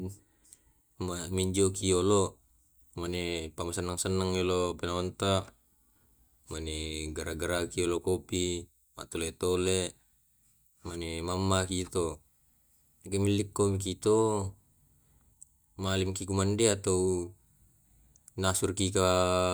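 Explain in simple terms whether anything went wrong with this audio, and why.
Nothing went wrong; no faults can be heard.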